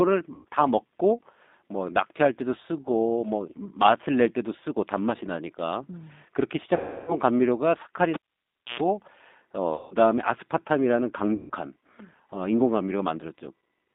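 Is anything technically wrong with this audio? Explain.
Yes, the speech has three kinds of fault.

G.729 codec, throughout: the speech is rebuilt at 8 kbit/s from a vocal-tract filter, pitch predictor and a few pulses per frame, and squeezed into roughly 200 Hz to 3.7 kHz. It sounds plainly rough, thin and somewhat synthetic.

VoIP packet loss concealed by the speech codec, at 0.35–0.45 s, 6.76–7.15 s, 9.75–9.94 s and 11.34–11.50 s, covering about 100, 320, 160 and 160 ms of lost audio: the decoder keeps extending its last pitch and filter at falling gain, so each gap becomes a buzzy, fading smear, and the voice stays weak briefly after.

Cable pulled and plugged in, 8.14–8.80 s: a live lead comes out and goes back in. A pop is followed by about 0.6 s of near silence, a roughly 0.11 s burst of 60 Hz mains buzz as the plug tip makes contact, and a second pop when the sound returns.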